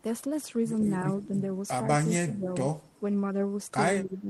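Echo leak at 1.20 to 1.28 s: a faint copy of the speech returns about 164 ms after the original, roughly 25 dB below it, lasting only a brief scrap. The likely cause is an echo canceller on a loudspeaker end of this speech call that failed to cancel all the sound its microphone picked up from the loudspeaker, so a short residue was sent back down the line. Speech suppressed in double talk occurs at 2.17 to 2.49 s and again at 4.04 to 4.28 s. The talker's level sinks by as much as 20 dB across about 300 ms in the first stretch, and by about 10 dB across about 200 ms in the second, so those passages sound dipped. The likely cause is both ends talking at once, so the echo canceller could not tell the local talker from loudspeaker echo and attenuated everything together.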